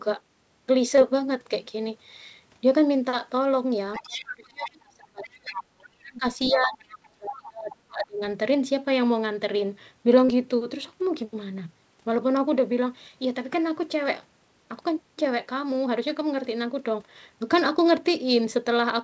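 Right at the start, from 0.96 to 0.99 s, there's a short concealed packet loss: about 20 ms of the speech didn't arrive in time, and the receiver stretched the preceding sound over the gap before easing back into the real signal. You hear it as a brief smear or wobble. It's the kind of hiccup where a quick consonant can just disappear.

Then from 3.97 to 8.21 s things get messier. The other side's voice is leaking through at 3.93 to 4.28, 4.64 to 4.71, 5.23 to 5.83, 6.49 to 6.77 and 7.28 to 7.76 s, sitting about 10 dB under the talker. That's most likely loudspeaker playback that the echo canceller didn't fully strip from the mic, so you get scraps of a second voice underneath.

Across that same roughly four-second stretch you also get speech suppressed in double talk, probably because the canceller couldn't tell its own talker from the echo while both sides were going and just ducked everything. 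The near voice dips, at worst by about 35 dB.

Finally, around 10.25 to 10.30 s there's a second short concealed packet loss, a bigger one with about 40 ms gone. The fill only stretches the preceding sound for about 31 ms before the real audio comes back, so this one's a longer wobble or smear than the first.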